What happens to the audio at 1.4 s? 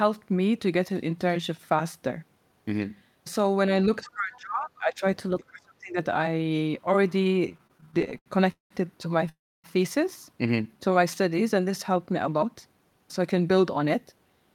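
Nothing goes wrong at 1.4 s; the speech is intact at that moment, with no dropout, click or distortion.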